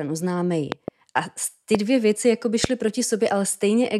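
A voltage spike, likely from a plug, switch, static or driver glitch, enters the signal as a loud pop: twice at 0.72–0.90 s, once at 1.75–1.77 s before "dvě věci jako by", once at 2.64–2.67 s after it, roughly 15–20 dB above the speech continuing underneath.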